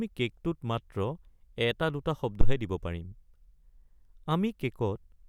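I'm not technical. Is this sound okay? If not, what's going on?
No. At about 2.41 seconds there is a phantom power thump, a deep, dull thud lasting until about 2.60 seconds. It happens when the microphone's power supply is switched on or off while recording, and that sudden jump in electricity comes through as a low boom that dies away in a few hundredths of a second. Unlike a breath pop or someone knocking the microphone, it is purely electrical, with no breath or handling noise.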